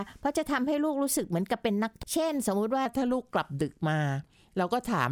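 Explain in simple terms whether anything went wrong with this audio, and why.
At 2.03 to 2.06 s a brief chirp, click or short hole cuts in. This is damaged data in a compressed stream. The decoder hit broken bytes, lost its place and searched for the next frame.

From 2.86 s to the end, the speech plays at 0.89 times normal speed. This section at the wrong speed sounds slower and about two semitones deeper, likely from a clock mismatch.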